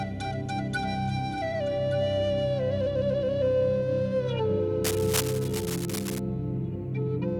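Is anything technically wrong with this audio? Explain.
Yes. Cable scratch noise runs from 4.84 to 6.20 s: dense, uneven bursts of scratching and rustling sit over the music, at around 10 dB below it. The likely cause is a worn cable or connector being moved, its contact resistance fluctuating rapidly.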